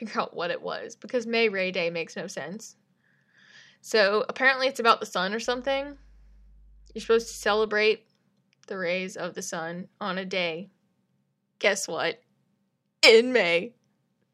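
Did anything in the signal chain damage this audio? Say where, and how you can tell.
Yes. Mains hum enters the analogue wiring from 5.46 s to 7.66 s, just after "about the sun or". A ground loop or a nearby transformer is letting the 50 Hz power line couple into the signal path, so a steady low tone at 50 Hz with a few low harmonics sits under the speech. It is weak, roughly 30 dB below the signal.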